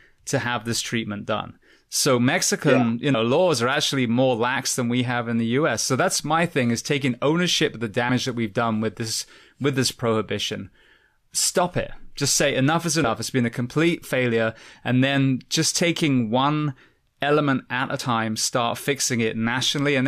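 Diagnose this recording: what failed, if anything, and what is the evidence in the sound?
The recorder's chunked capture likely lost audio at its 5 s block boundaries: audio missing between chunks. Butt-joined skips of roughly 50 ms fall at 3.14 s before "laws are actually more", 13.04 s after "say enough is", and 17.99 s after "one element at a".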